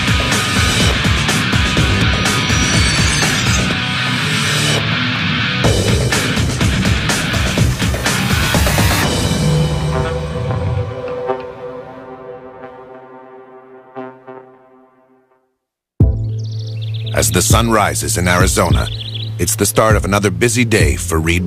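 Nothing in this one jumps out as a technical fault; it just runs along without any glitch worth pointing to.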